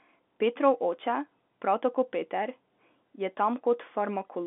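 There are no technical faults to describe at any point in this speech clip.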